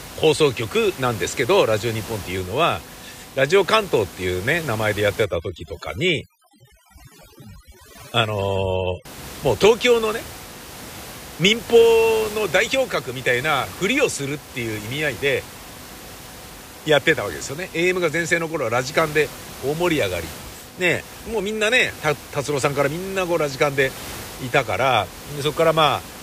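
A speech recording with overdone noise removal from 5.25 to 9.05 s. Through that stretch, a noise reduction stage clamps down too hard. Any frequency band close to its noise estimate gets pulled far down or cut out. The background drops and breaks up into twinkling, warbling specks. Quieter parts of the speech get caught as well. The steady room noise, about 17 dB below the speech, belongs to the recording itself.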